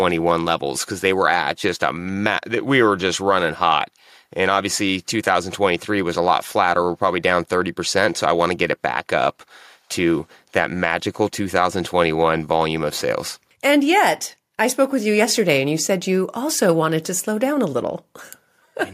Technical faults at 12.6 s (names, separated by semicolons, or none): none